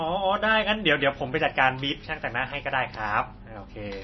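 Throughout the speech, nothing is present above 5.9 kHz, and the sound is watery and swirly, with metallic chirps on s sounds and smeared attacks. The likely cause is heavy MP3 compression, consistent with a bitrate near 24 kbps, where the encoder cuts the treble and drops weak frequency lines that flicker between frames.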